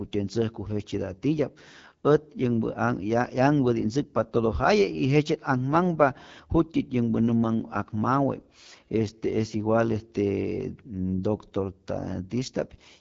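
The clip is speech carrying AMR wideband (HD Voice) codec damage from start to finish. It sounds rough and raspy, which fits one of the lowest AMR-WB rates, around 8.85 kbit/s. There are too few bits for the vocal-tract model to reproduce the speech cleanly, and nothing is present above 7.5 kHz.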